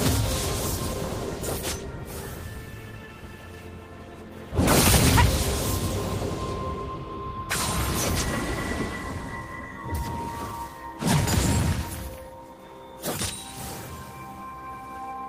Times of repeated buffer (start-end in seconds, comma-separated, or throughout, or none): none